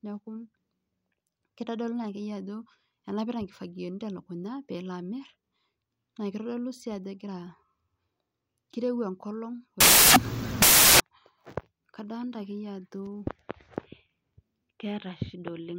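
From 9.8 to 11.0 s, the speech gives way to loud, harsh broadband noise. These are samples built from the wrong bytes. Each value was assembled with its bytes misaligned or swapped. The fast-changing low bits therefore dominate.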